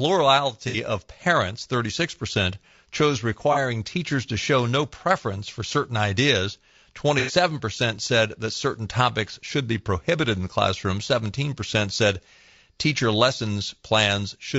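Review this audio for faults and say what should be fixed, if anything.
The whole clip carries plainly audible low-delay AAC compression. The speech sounds rough and grainy. Noise fills the gaps between harmonics, and the top band sounds thin and synthetic. The likely cause is AAC-ELD, whose short frames resolve pitch poorly and spend bits fast. The damage fits a rate near 32 kbps. Raising the bitrate, or using a longer-frame codec where delay allows, would prevent it.

AAC frame loss with concealment appears three times: 0.68 to 0.76 s, 3.53 to 3.58 s, and 7.19 to 7.33 s. Each patch sounds smeared, noisy or phasey. The decoder rebuilt the missing frames from the last good spectrum. The lengths fit two, one and three lost frames of about 30 ms each. Better transport protection, such as forward error correction or retransmission, would prevent it.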